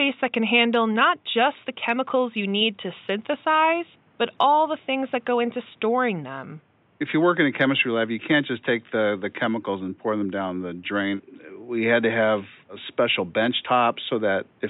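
No technical faults are audible.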